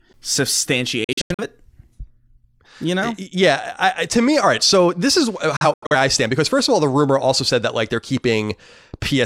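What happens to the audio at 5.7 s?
A digital broadcast dropout: between 5.57 and 5.95 s the receiver stopped getting clean frames, failing reception or checksums, and muted each bad stretch until valid data returned. The speech drops out in short, scattered holes, each entered through a fade of about 3 ms, totalling about 170 ms of silence spread over 341 ms. The longest gap is 85 ms, which fits two of the four lost frames. Whatever was transmitted during those holes is gone.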